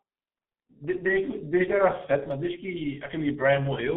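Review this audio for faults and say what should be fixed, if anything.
The G.723.1 codec muffles and roughens the speech throughout, confining it to 200 Hz–3.5 kHz and smearing consonants, which fits a roughly 6 kbit/s stream. To avoid this, capture or route the call through a wideband, higher-bitrate codec.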